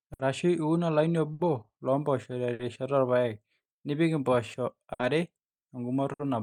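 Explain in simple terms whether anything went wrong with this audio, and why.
Five times the speech briefly hangs on a sound for about 60 milliseconds, at 0.13, 1.33, 2.53, 4.93 and 6.13 seconds. Each is a short stall from a late packet: the next chunk of audio arrived late, so the player stretched the last sound until it came, then carried on with nothing lost.

Alongside those hiccups there is also clock drift between sender and receiver. The sending device's clock runs roughly 5 percent slow, so the player's buffer keeps draining and the player keeps repeating short pieces, causing small timing hiccups all through the clip.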